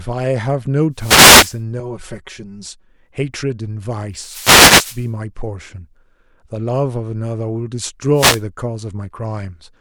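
From 0.93 to 1.61 s, a wireless microphone noise hit cuts in as a short swish of static. The radio signal fades as reflections cancel. Receiver noise then rises over the speech.

Between 1.8 and 2.89 s, channel delay causes comb filtering. One channel lags by around 5 ms, and the two are summed to mono. Notches begin near 100 Hz and repeat at even spacing. The speech turns hollow and phasey.

Further noise hits follow from 4.13 to 5.12 s and from 8.13 to 8.43 s. Each is a burst of hiss as the signal drops again.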